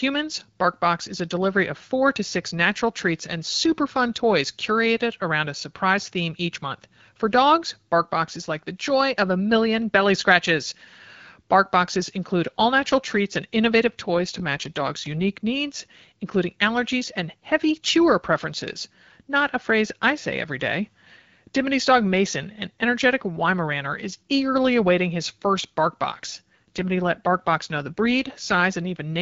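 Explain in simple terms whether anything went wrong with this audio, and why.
Twice the voice briefly turns rough and synthetic: from 14.16 to 15.38 s, after "natural treats and innovative", and from 26.31 to 28.64 s, after "awaiting his first bark". This is an AMR rate drop. A weak phone signal made the call's codec spend fewer bits on the voice, without cutting the sound out.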